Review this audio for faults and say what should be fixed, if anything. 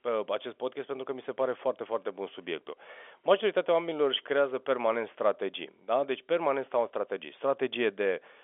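Nothing needs to be fixed, as I hear no faults in this audio.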